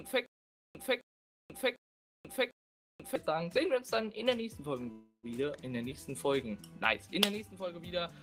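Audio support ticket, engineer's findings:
Stutter with silent gaps, 0.0 to 3.16 s, already going when the clip opens. A 263 ms fragment repeats four times, about 486 ms of dead digital silence after each, so a 749 ms cycle. Likely a stalled player or stream replaying its last buffer on each retry. Real audio from that stretch is gone.

Call audio freeze, 4.91 to 5.26 s. The last sound gets stretched into a fading buzz or hiss for about 318 ms, ending in roughly 100 ms of silence, then carries on where it stopped. Likely late packets draining the jitter buffer. Delay added, nothing lost.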